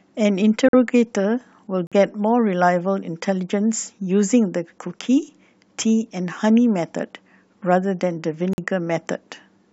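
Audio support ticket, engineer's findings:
Abrupt dropouts to silence in the speech, about 0.05–0.06 s each, at 0.69, 1.87 and 8.53 s. Corrupt frame muted: the decoder rejected damaged frames, the player substituted silence, and timing was held.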